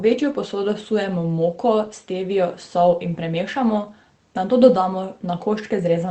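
No technical faults can be heard in this speech recording. It has come through a WebRTC call path working as intended, with content ending at 8 kHz and the usual coding texture of a call codec, which fits Opus at around 24 kbps.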